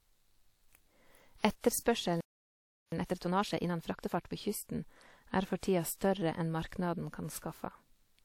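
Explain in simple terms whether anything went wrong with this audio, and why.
A playback stall hits at 2.21 seconds: the speech cuts out and there is silence for about 0.72 seconds, until 2.92 seconds. The likely cause is that the player ran short of incoming data, or its processing was held up, so it had nothing to send to the speaker. When it recovered, the speech picked up again rather than simply continuing as if nothing had happened.

Time-compressed catch-up follows straight after, from 2.92 to 4.34 seconds, ending just before "på kysten er". To make up for the lost time, the player plays the speech about 1.5 times faster than normal. It does this by trimming out tiny slices of sound and blending the joins, so the voice keeps its normal pitch but sounds hurried until the player has caught up.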